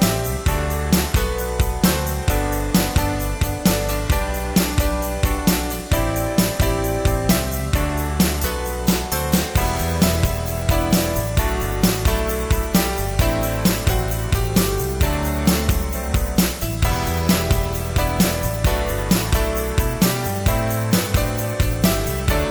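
No technical faults are audible anywhere in the clip.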